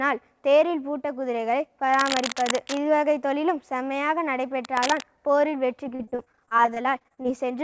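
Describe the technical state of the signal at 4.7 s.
At 4.7 s the signal carries cable scratch noise, running from 4.64 to 5.02 s. Dense, uneven bursts of crackle and rustle sit over the sound, only about 5 dB below it. The likely cause is a worn cable, connector or control being moved, so its contact resistance jumps about rapidly. Like the rest of the clip, the scratching stops short of 8 kHz, the band limit of the call codec.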